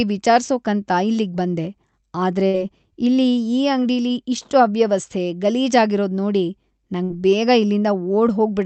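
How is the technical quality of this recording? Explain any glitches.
The speech has two short dropouts, and the Opus call path cuts the high frequencies off at about 8 kHz. Two bursts of packet loss occur, at 2.47 to 2.57 s, just before "ಇಲ್ಲಿ ಈ ಅಂಗ್ಡಿಲಿ ಇಷ್ಟ್", and at 7.04 to 7.13 s. Each time, consecutive packets arrived too late or never. The receiver stretched the last sound for about 60 ms while fading it, giving a brief buzz or hiss. Speech then resumes about 60 ms further on, with that stretch missing.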